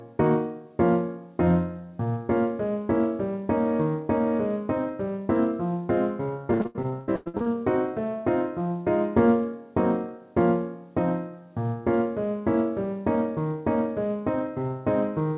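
From 6.54 to 7.47 s the sound turns choppy and robotic, breaking up about ten times, with gaps up to 100 ms. This is repeated packet loss: the call's concealment stretched the last sound over each hole, covering about half that stretch, audible over the 4 kHz band limit of what sounds like G.711.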